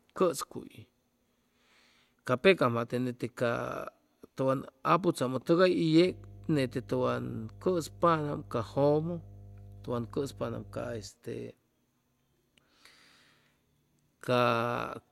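A speech recording with mains hum from 6.04 s to 11.10 s. A steady 50 Hz tone sits under the speech, about 20 dB below it. Power-line energy is leaking into the signal path, through a ground loop or a nearby transformer.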